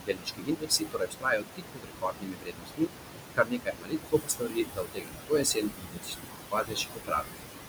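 Noise suppressor artifacts run through the whole recording. The suppressor pulls down about 20 dB in every band it judges to be steady room noise, though that noise sits only about 5 dB below the speech. The background sinks and swells frame by frame. On a spectrogram the noise floor looks patchy and blotchy instead of an even haze.

Speech cut by the noise suppressor occurs from 0.0 to 3.0 s and again from 3.33 to 7.3 s, covering about three seconds each time. Because the speech barely rises above the noise, the suppressor mistakes parts of it for background, dropping them by up to about 22 dB. Consonants and word endings sound swallowed and faint. The waveform shows shrunken envelopes.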